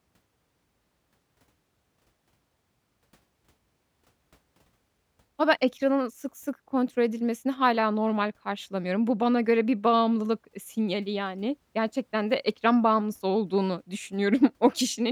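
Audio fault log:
Nothing stood out on listening to the speech in this recording.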